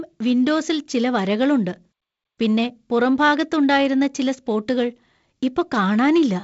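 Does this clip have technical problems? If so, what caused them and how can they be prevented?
No, nothing in this speech needs fixing.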